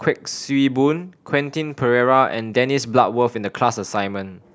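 A speech clip with nothing technically wrong with it, so there are no times or causes to give.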